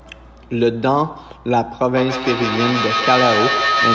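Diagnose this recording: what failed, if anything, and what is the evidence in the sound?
From 1.96 s to the end, a tone near 1.5 kHz swells until it matches the speech in level, with the loop repeating about every 150 ms. This is feedback howl at the call stage: two devices sharing one room loop microphone to loudspeaker, gaining level each pass and narrowing to that favoured frequency.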